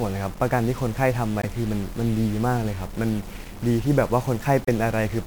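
A distortion runs through the whole of this speech recording, and even the pauses between phrases are filled with a gritty noise floor instead of falling quiet. The likely cause is a stuck bit: one bit of each sample held at a fixed value by a faulty line or converter, so roughly half the samples are pushed off by that bit's weight in a pattern that follows the waveform, and near-silent passages flip between signs and turn into noise. On top of that, two short glitches break through, at 1.42 to 1.45 s and again at 4.65 to 4.69 s. These are damaged data in a compressed stream. Corrupted bytes in those stretches left the decoder misreading frames and losing sync until it could lock onto the next valid frame header, and each brief glitch is the sound of that recovery.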